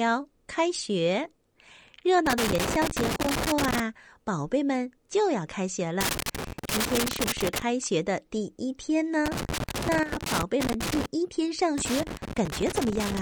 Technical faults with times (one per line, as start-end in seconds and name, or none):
2.26-3.80 loose connector crackle
6.01-7.62 loose connector crackle
9.26-11.06 loose connector crackle
10.03-10.12 sudden gain jump
11.78-13.22 loose connector crackle